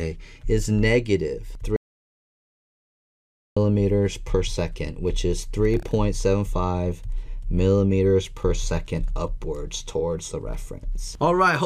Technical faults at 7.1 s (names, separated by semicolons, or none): none